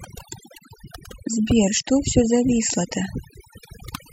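Speech marred throughout by overdone noise removal: the spectrogram shows gaps and isolated twinkling specks where bands near the noise floor were gated away.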